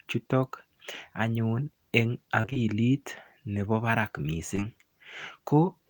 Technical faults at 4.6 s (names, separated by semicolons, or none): short concealed packet loss